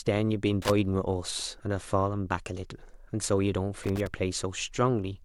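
An irregular burst of crackle and scratching cuts through the speech from 0.62 to 0.70 s, and again, longer, from 3.83 to 4.07 s. It is loose connector crackle: a worn or dirty contact keeps making and breaking, chopping the signal.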